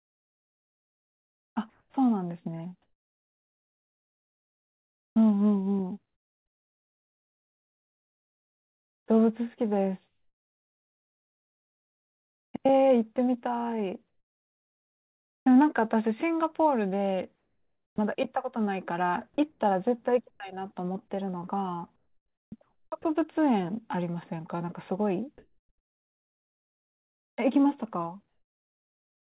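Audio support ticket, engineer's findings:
Comfort noise in place of the background, 1.7–5.16 s. Real room tone gives way to steady, featureless hiss. Likely DTX at the sender, with the receiver synthesising comfort noise during the detected pause.

Same at 14.08–15.46 s. Near-silent background replaced by synthetic noise, floor up about 16 dB. Likely comfort noise generation filling a DTX gap.

Same at 17.36–17.98 s. Background swapped for flat noise about 4 dB quieter. Likely receiver-side comfort noise during a non-speech period.

Same at 19.52–20.4 s. Brief flattening of the background texture. Likely comfort noise substitution during DTX.

Same at 25.38–27.38 s. Quiet floor replaced by uniform hiss about 13 dB higher. Likely comfort noise from the receiver while transmission was paused.

Onset clipped by the voice detector, 1.89–1.94 s. Speech enters abruptly, with 50 ms of its soft start missing. 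Likely sender VAD reacting late, so the first frames were never sent and comfort noise played in their place.

Same at 17.94–17.98 s. A 40 ms onset is cut, and speech starts hard out of the synthetic noise. Likely sender VAD reacting late to the returning speech.

Sound chopped by the voice detector, 21.96–23.04 s. Choppy speech, with edges and quiet syllables dropping out. Likely VAD toggling transmission repeatedly, with comfort noise filling the gaps.

Audio is band-limited to 4 kHz throughout, which fits the narrowband G.711 call codec.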